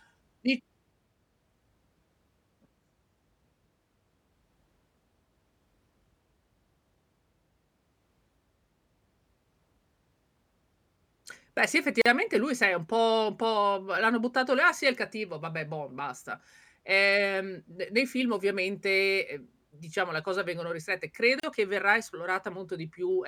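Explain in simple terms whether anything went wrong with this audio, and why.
Speech drops out at 12.02 s and 21.40 s, about 40 ms and 36 ms: a gap at a join of encoded pieces, left by untrimmed encoder padding.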